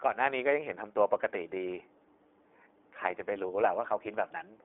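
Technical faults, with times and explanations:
Throughout, iLBC codec. The speech is held inside a telephone band of 300 Hz to 3.6 kHz. Nothing at all passes above 3.8 kHz, so it sounds thin and muffled. The codec damage is plainly audible as a rough, slightly synthetic grain. iLBC codes the excitation of each short frame on its own, without leaning on the frame before. The texture fits 20 ms frames at a rate near 15.2 kbps.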